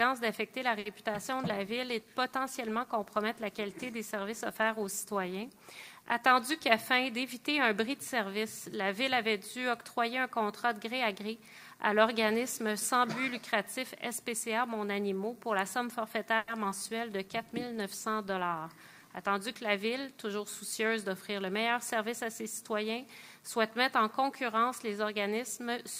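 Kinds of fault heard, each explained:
Short stall from a late packet: At 0.79 to 0.87 s the sound is held for 60 ms while a packet is overdue, then resumes from the same point. Nothing is lost, which separates it from concealed loss. It is just a brief drawn-out moment.
Short concealed packet loss: At 1.13 to 1.31 s and 16.64 to 16.67 s, pieces of audio (20 ms, then 40 ms) never arrive and are papered over with a short continuation. The result is a quick smear or wobble where real sound is actually missing, unlike a stall.
Call bitrate drop: From 1.16 to 6.65 s and again from 17.22 to 20.11 s, the encoder falls from 64 to 28 kbps. The audio turns coarser and duller for seconds at a time. This lasting change in tone quality distinguishes it from brief timing glitches.
Jitter buffer speed-up: Over 6.36 to 7.42 s and 18.55 to 20.86 s, the receiver trims tiny slices to drain excess delay. It removes roughly 50 ms and then 100 ms, so playback runs about 4% faster at unchanged pitch. 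The result is a slight speed-up rather than any dropout.
Call audio freeze: At 16.38 to 16.50 s, the last sound is stretched for 100 ms without falling to silence, then continues where it left off. The likely cause is delayed packets emptying the buffer. It is longer than the short stall but still loses nothing.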